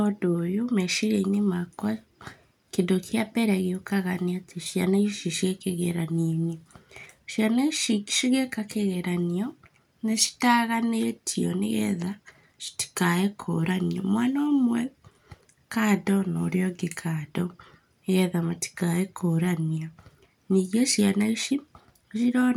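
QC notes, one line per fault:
Nothing to flag here; I couldn't hear a single problem anywhere in the speech.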